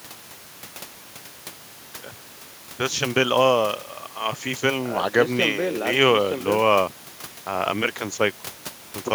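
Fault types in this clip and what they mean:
Nothing stood out on listening to this speech recording, apart from the room background sitting about 19 dB below the talking.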